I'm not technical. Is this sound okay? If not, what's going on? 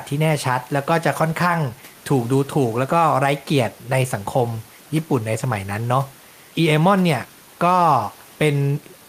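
Yes, nothing's wrong with it.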